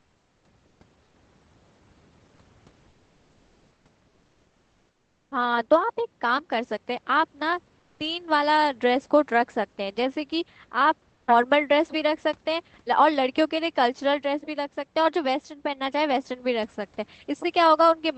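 Comfort noise in place of the background occurs at 0.00–0.43, 1.03–1.15, 2.89–3.85, 7.79–7.99 and 11.13–11.27 s. In each pause the room's textured background gives way to steady, featureless hiss about 2 to 4 dB quieter, likely from Opus discontinuous transmission.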